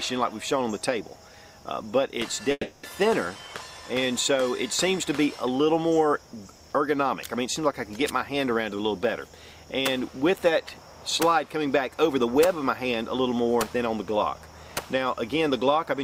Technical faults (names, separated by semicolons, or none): long network dropout